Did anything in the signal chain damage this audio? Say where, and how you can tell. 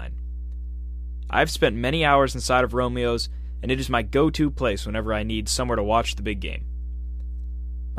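Yes, in the analogue wiring: a ground loop or nearby transformer let the 60 Hz power line leak into the signal, producing mains hum. It sits under the speech for the whole clip as a steady low tone with low harmonics, only around 10 dB below the speech.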